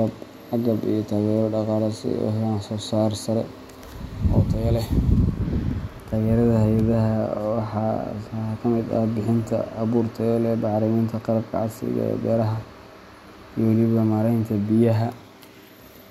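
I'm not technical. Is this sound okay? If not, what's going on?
Yes, nothing in this recording stood out to me as a problem when I listened to it.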